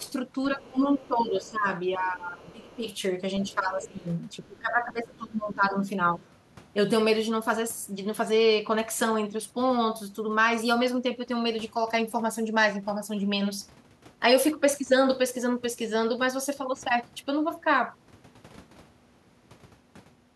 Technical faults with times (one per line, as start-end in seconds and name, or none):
0.02-0.07 other side's voice leaking through
0.53-2.86 speech suppressed in double talk
0.98-1.08 other side's voice leaking through
2.44-2.90 other side's voice leaking through
3.40-4.06 speech suppressed in double talk
3.49-3.88 other side's voice leaking through
4.41-6.23 speech suppressed in double talk